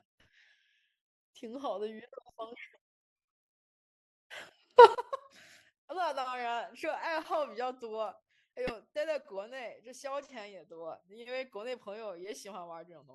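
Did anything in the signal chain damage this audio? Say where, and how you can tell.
Yes. A sudden gain jump at 4.78 s lifts speech and background noise together by about 21 dB until 4.95 s, likely an unramped digital gain step in call processing.

A corrupt frame was decoded at 8.67 to 8.73 s: a brief burst of misplaced energy peaking around -25 dBFS and spanning one codec frame, where damaged bits were played rather than concealed.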